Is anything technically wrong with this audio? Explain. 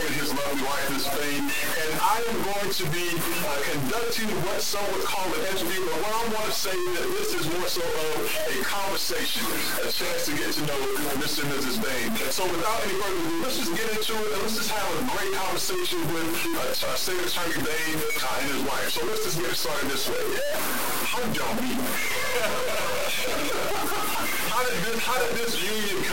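Yes. Low bit depth without dither runs through the whole clip. The likely cause is that the samples were truncated to a very coarse set of levels without dither, and the graininess fits about a 3-bit signal. Because no noise decorrelates the rounding error, that error tracks the waveform, leaving distortion only a few decibels below the signal. It sounds harsh and gritty, with grain that changes as the sound changes, and the quietest passages sputter or drop out.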